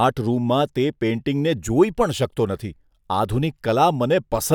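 Nothing goes wrong anywhere in this speech recording, so there's no technical fault to point to at any moment.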